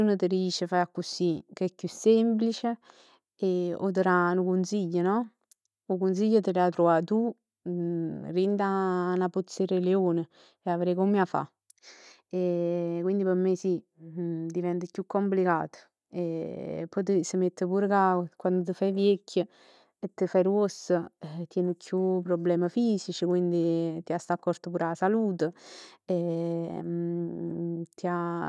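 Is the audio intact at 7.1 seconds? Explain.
Yes, at 7.1 seconds the audio is intact, with no audible fault at that moment.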